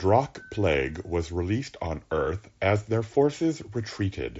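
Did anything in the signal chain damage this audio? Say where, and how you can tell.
No, the signal chain left this speech undamaged; it arrives band-limited to about 7.7 kHz, which points to a Bluetooth headset path running the wideband mSBC codec as designed.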